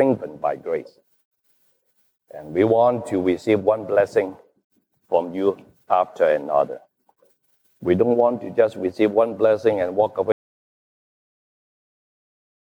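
At 10.32 s the sound cuts out abruptly into dead silence with no room tone lasting to the end, an audio dropout to silence, likely from the input being lost while recording continued.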